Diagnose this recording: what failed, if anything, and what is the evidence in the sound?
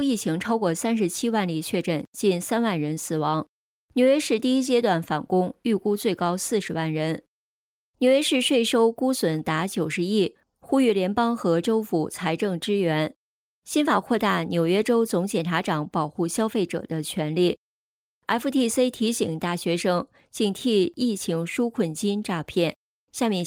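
Nothing in this recording points to a failure at any stage of the chain. No dropouts, clicks, distortion or timing disturbances can be heard anywhere in the audio.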